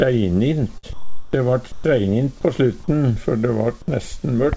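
At 0.78 s there's a burst of packet loss running to about 0.85 s. The receiver stretched the last bit of sound over roughly 50 ms and faded it into a brief buzz or hiss, then jumped ahead, so about 60 ms of audio is simply gone.

From 0.93 to 1.33 s the real background drops out and you get comfort noise in place of the background: a flat, featureless hiss about 6 dB quieter than the room tone it replaces. That room tone itself sits roughly 23 dB below the loud parts. It's likely the sender's voice detector stopped transmitting and the receiver synthesised filler. It happens again from 1.72 to 1.84 s, shorter and only about 2 dB quieter, but just as lifeless.

Right at the end of that first stretch, from 1.27 to 1.33 s, the returning sound gets its onset clipped by the voice detector. The first 60 ms never arrived, so the sound starts abruptly, with no soft lead-in. The likely cause is the detector noticing the restart a beat late. 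Across the whole clip the call path cuts everything above 8 kHz.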